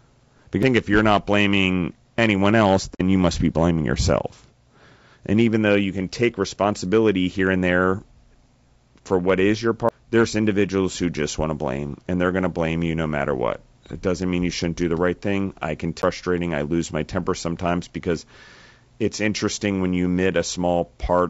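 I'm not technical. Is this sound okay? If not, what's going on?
No. The clip has three kinds of fault.

Low-delay AAC compression runs through the whole clip. The voice sounds rough and grainy, with a hiss-like noise between the tones of the voice and a top end that sounds lowered or artificial. This is likely the low-delay AAC coding used for video calls, which squeezes the sound into small chunks to keep delay short. At this clip's data rate, the squeezing is plainly audible.

A CD skip occurs at 0.63 s, 9.89 s and 16.02 s. Each time, the playback jumps to another spot on the disc's spiral track, forward or back by one or more turns of the disc. The player goes silent for an instant, very briefly at 0.63 s and for about 15 milliseconds at the other two, then carries on from the new place. The result is a tiny gap followed by an abrupt jump in the sound.

AAC frame loss with muting happens from 2.94 s to 3.01 s. 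Small chunks of the coded sound went missing, and the decoder filled them with silence, which fits two lost chunks. Because neighbouring chunks overlap, the sound fades out and back in rather than cutting off sharply. You hear it as a soft-edged hole about 60 milliseconds long.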